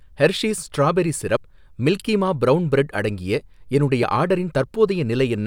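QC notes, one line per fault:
1.37 s and 4.03 s: dropped buffer (overrun). At each the sound jumps forward with no silence. About 30 ms is lost at the first and about 10 ms at the second. Likely the samples went unread before being overwritten, so both sides join directly.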